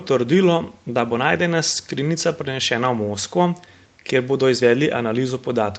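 Nothing in this speech points to a technical fault.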